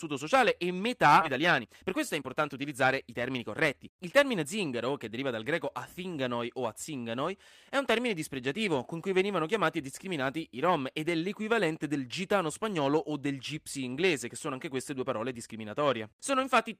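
In this speech clip, right after "sociale e" at 1.21 to 1.23 s, the audio jumps forward with no gap and about a second of speech is missing: a skip ahead, where audio was dropped in transit or by an overflowing jitter buffer. From 1.35 to 4.8 s, up to "che deriva dal greco", speech sounds hurried at about 113% speed with unchanged pitch. This is a jitter buffer speed-up, where repeated pitch-period cuts removed about half a second to shrink excess buffered delay.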